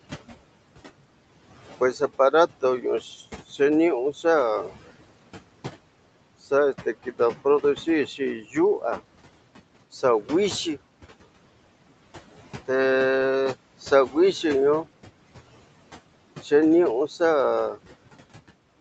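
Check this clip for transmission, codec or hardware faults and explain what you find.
One fault runs through the whole recording: noise suppressor artifacts. The room noise, sitting about 17 dB below the speech, and the top end stopping at 8 kHz are both normal rather than faults.

Noise suppressor artifacts, throughout: A suppressor estimates the steady background and pulls down, frame by frame, every band it judges to be noise, here by about 17 dB. Between phrases the noise sinks, then swells back under the speech. The waveform's floor dips sharply in pauses.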